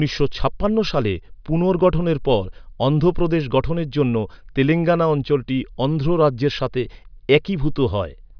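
No technical faults are audible.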